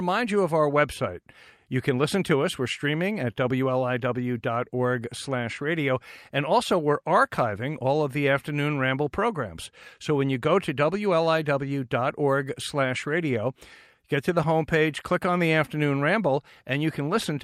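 There are no technical faults to describe, in time order or otherwise.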